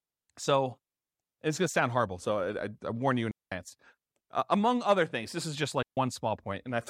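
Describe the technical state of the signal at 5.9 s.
At 5.9 s there's a digital wireless dropout, running from 5.83 to 5.97 s. The link lost too much data, so the receiver muted for about 143 ms, leaving a clean hole in the speech without any noise burst.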